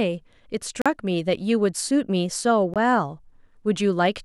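Packets likely arrived too late at the wireless headphones and were discarded, a Bluetooth dropout, cutting the speech to silence from 0.82 to 0.86 s (about 40 ms, which fits two lost packets) and from 2.74 to 2.76 s (about 20 ms). The sound resumes further on, as though it had kept playing.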